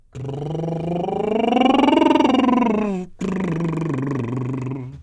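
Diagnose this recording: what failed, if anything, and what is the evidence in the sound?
Nothing failed in this music recording. None of the stages from the wiring through to playback leaves any audible trace of trouble.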